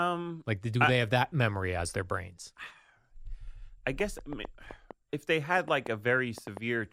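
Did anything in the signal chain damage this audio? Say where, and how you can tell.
Yes. From 4.00 s to 6.58 s there's a train of clicks riding over the speech, about ten of them, landing roughly four times a second but at an uneven pace, and they tick through the pauses too. They're sharp and alike in shape, peaking around 10 dB above the speech. Same-shaped pulses with no relation to the talker point to something upstream in the analogue wiring or interface, likely interference from nearby equipment or a faulty connection or power supply injecting pulses.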